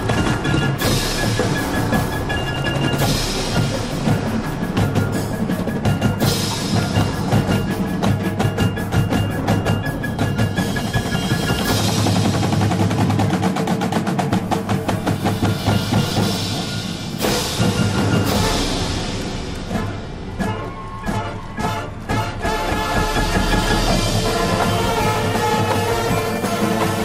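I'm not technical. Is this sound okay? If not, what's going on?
No. There's one brief glitch, from 17.29 to 17.31 s, caused by chunks out of order. The audio travels in tiny pieces of about 11 ms each. One piece arrived a single step late and played after the piece that should follow it. You hear a quick jumbled flicker. Unlike a dropout, nothing goes missing or silent; the sound is only briefly shuffled.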